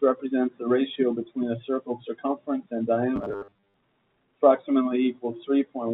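Clock drift between sender and receiver runs through the whole speech clip. The sender's clock is slower by roughly 1.5 percent, so the receiver's buffer keeps draining rather than overflowing. Repeated timing corrections from 0.05 to 5.69 s stretch the audio to 99 percent speed, padding in roughly 70 ms through small repeated pieces. These are scattered, uneven hiccups, not a steady slowdown or pitch drop. From 3.16 to 3.74 s, robotic sound from repeated short buffers takes over. A rigid, metallic 100 Hz buzz still roughly tracks the speech, most likely because a 10 ms fragment is looped while about 70 percent of the real audio is skipped. That fixed buzz pitch sets it apart from codec warble. The G.711 call path cuts off everything above 4 kHz throughout.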